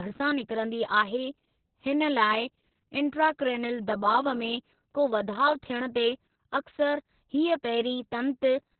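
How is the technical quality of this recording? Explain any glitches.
The technical quality is poor because of heavy Opus voice compression. It runs throughout. Nothing is heard above 4.2 kHz, so the speech sounds muffled and narrowband. The SILK coder rebuilds speech from a coarse prediction model. This makes it hoarse and slightly robotic, which fits a very low bitrate of about 6 kbps.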